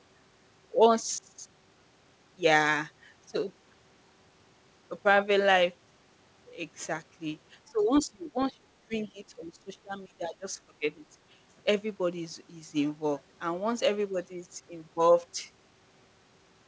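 This speech clip shows speech suppressed in double talk. The echo canceller likely mistook the talker for loudspeaker echo while both sides spoke and turned the talker down. The voice sinks by up to about 20 dB from 7.68 to 8.7 s, from 8.87 to 8.95 s, and from 9.13 to 10.88 s, and by about 10 dB from 11.11 to 11.16 s, so it dips and drops out in pieces. Nothing is heard above 8 kHz, which fits a G.722 call codec.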